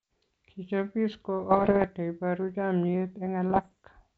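Speech with two bursts of pops and rough, crackling distortion with brief jumps in level: one from 1.51 to 1.86 s, just before "neiporu chamiet", and another from 3.50 to 3.72 s, right after "neiporu chamiet". These are bit errors on an ADPCM link, carried here over G.722 wideband telephone coding at 64 kbit/s, at an error rate of a bit under one percent. Each flipped bit throws off the decoder's step size and predictor, so the damage rings on for milliseconds.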